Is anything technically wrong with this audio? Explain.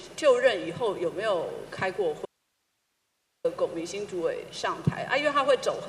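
Yes. There is an audio dropout to a faint residue from 2.25 s to 3.45 s, lasting about 1.19 s. The sound cuts off abruptly and returns just as suddenly, with only low hiss filling the gap, roughly 50 dB below the signal. The likely cause is a momentary loss of the source feeding a path that stayed live. On a waveform the trace collapses to a thin flat band, and a spectrogram shows a sharp-edged block of faint broadband noise.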